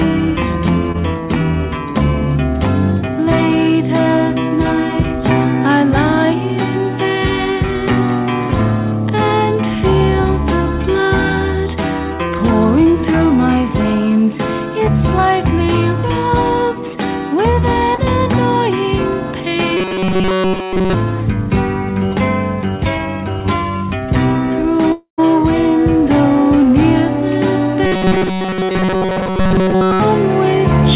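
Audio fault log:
0.92–0.96 s and 17.96–18.00 s, short concealed packet loss: each spot has a brief smear or wobble where about 20 ms of audio never arrived in time. The receiver bridged the gap by extending the preceding sound, then blended back into the real signal.
19.77–20.94 s and 27.86–30.00 s, robotic sound from repeated short buffers: the sound becomes a rigid metallic buzz at 188 Hz, across the whole first stretch and most of the second. The likely cause is a tiny chunk, around 5.3 ms, being looped while fresh audio was skipped, forcing that fixed pitch.
24.92–25.20 s, long network dropout: the sound turns into a fading buzz or hiss, drops to about a tenth of a second of silence, then resumes further on with roughly a quarter second lost. This likely comes from incoming audio stalling while the receiver padded the gap with concealment.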